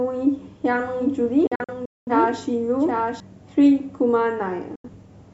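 From 0.80 s to 3.20 s a doubled audio track is heard. A second, full-band copy of the speech runs about 0.7 s behind the original. It sits about 5 dB quieter. It carries no added room sound and no decay. It starts and stops abruptly at those edges. The likely cause is a second capture through a slower path, or an edit that left two copies out of step.

Between 1.47 s and 2.12 s there is a digital broadcast dropout. The receiver lost good data and muted. The sound drops out in several short holes spread over about 0.6 s. About 0.34 s goes missing in total. The longest single gap lasts about 0.21 s. Each mute fades in 3 ms, so the cuts are sharp. The pattern points to a run of failed frames. Whatever was sent during the holes is gone.

A second digital broadcast dropout comes at 4.75 s to 4.90 s. About 85 ms of sound is lost, with the same 3 ms fade. Sound returns afterwards.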